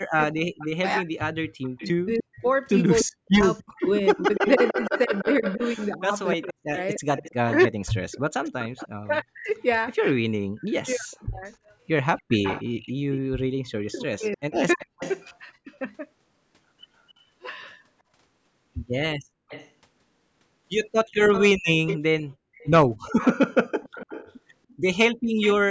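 From 0.0 to 11.52 s the speech repeatedly dips by as much as about 40 dB, roughly five seconds in total, likely speech suppressed in double talk: an echo canceller, faced with both sides talking, turned the near voice down along with the loudspeaker echo. The waveform shows abrupt notches, and the spectrogram shows darkened bands where the speech is turned down.

Overlapping this, from 0.36 to 15.24 s, a faint copy of the voice trails 294 ms behind at about 10 dB below it, likely an echo leak from a loudspeaker whose canceller let residue through. It appears as ghost harmonics shifted right on the spectrogram.

A further suppression from 13.89 to 15.71 s cuts out about 0.7 s of speech. At 17.12 to 17.23 s the background dips about 11 dB for roughly 0.1 s, the background gated by the echo canceller, a brief trough in the noise floor. The echo returns from 19.48 to 25.53 s with the same 294 ms lag. 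At 22.36 to 22.53 s the room sound drops about 40 dB to near silence, a hard gap in the waveform. From 22.97 to 23.41 s the speech is suppressed again, a 0.4 s hole. The spectrogram shows nothing above 8 kHz throughout.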